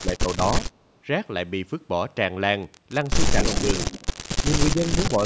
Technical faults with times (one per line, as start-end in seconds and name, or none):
0.00-0.41 speech suppressed in double talk
3.43-4.16 echo leak
3.45-3.67 speech suppressed in double talk
4.47-5.26 speech suppressed in double talk